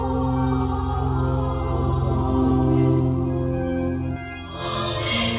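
From 4.16 s to the end at 5.38 s, the audio turns thin, bright and hissy, heard through a narrow call-codec band that stops at 4 kHz. This is pre-emphasis left on: a J.17-style treble boost, about 11 dB at 10 kHz relative to 1 kHz, with no matching de-emphasis applied.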